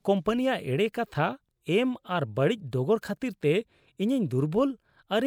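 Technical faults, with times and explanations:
No technical faults detected.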